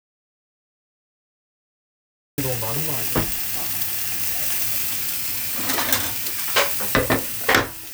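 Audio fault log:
0.00–2.38 s, audio dropout to silence: the input signal was likely lost, through a dropped device link or a stray mute, while recording carried on writing zeros. The clip opens in complete silence, without room tone, then the sound arrives abruptly mid-flow.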